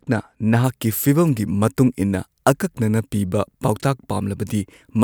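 From 0.64 s on, pre-emphasis is left on. The unreversed treble lift reaches about 11 dB at 10 kHz and keeps rising rather than shelving, so the sound is thin and sibilant.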